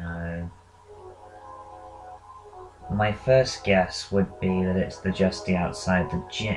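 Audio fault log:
No technical faults are audible anywhere in the recording, and the signal holds steady and continuous throughout.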